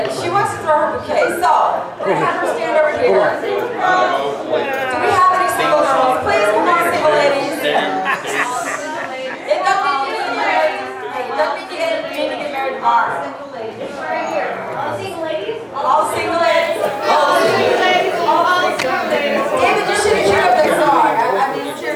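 From 16.47 s to the end at 21.95 s, quiet sounds turn grainy and gritty. This is likely low bit depth without dither, with rounding to about 7 bits. The error tracks the signal, sitting roughly 30 dB below it, so quiet sounds turn gritty.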